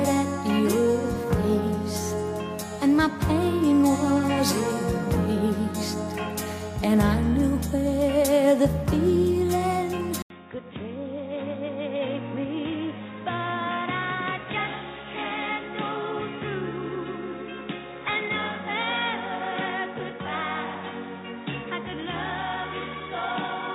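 Partway through, the recording likely switched its input to a poorer device: after an 80 ms silence at 10.22 s, the audio loses everything above 3.8 kHz, drops roughly 10 dB in level, gains a faint new noise floor, and stays dull and boxy to the end.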